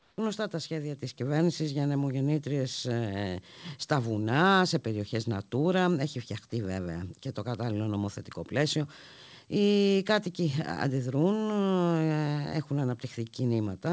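From 0 to 0.18 s, likely discontinuous transmission during the pause, so comfort noise in place of the background: a flat, featureless hiss about 3 dB quieter, until "τα σχέδια" begins. At 1.02 s, automatic gain control stepped the microphone volume up, and voice and background jump about 5 dB together between "τα σχέδια" and "κυβέρνησης για νεμογεννήτριες ε", in audio with nothing above 8 kHz, which fits a G.722 call path.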